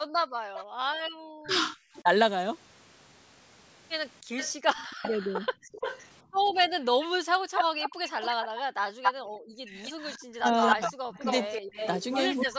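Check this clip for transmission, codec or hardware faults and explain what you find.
There are a few echo-canceller problems here, all from the call's speaker-and-mic path rather than the codec.

Background gated by the echo canceller: from 0.00 to 1.14 s and again from 6.23 to 7.19 s, the room tone drops sharply, about 40 dB and about 39 dB at the deepest. The canceller clamped the mic hard while the far end played, so the ambience vanishes and then comes back.

Echo leak: a delayed copy of the speech comes back, from 0.54 to 1.99 s at 293 ms and faint, about 15 dB down, then from 4.37 to 12.45 s at 268 ms and much louder, close to the main level. It's likely loudspeaker pickup the far end's canceller didn't fully remove.

Speech suppressed in double talk: the talker dips or chops out at 1.42 to 2.08 s, 4.98 to 5.46 s, and from 7.47 s to the end, with the drops reaching roughly 25 to 40 dB. 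This likely comes from the canceller confusing overlapping talk with echo and ducking both.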